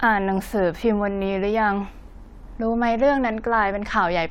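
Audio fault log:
No audible faults.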